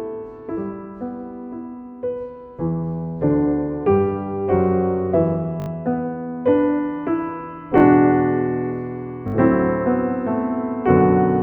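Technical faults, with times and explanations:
5.60–5.68 s, 7.78–7.82 s, 9.28–9.34 s: repeated buffer. A late device buffer is replayed four, two, then three extra times, giving brief buzzy stutters; the spacing fits a 20 ms buffer.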